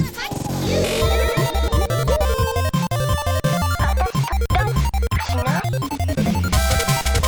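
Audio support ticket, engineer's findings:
Compressed frames skipped at 2.05 s and 4.55 s. Audio jumps ahead. First jump drops about one frame (roughly 50 ms), second about two (roughly 100 ms). 46.4 ms step fits 2048-sample frames at 44.1 kHz. Probable component: decoder or container, with frames missing or rejected as damaged. Spectrogram shows an abrupt content discontinuity.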